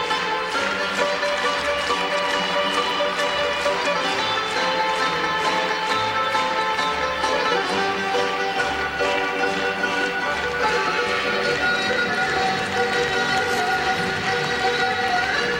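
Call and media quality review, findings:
No audible faults found on review; no dropouts, level problems or timing defects to report against any component.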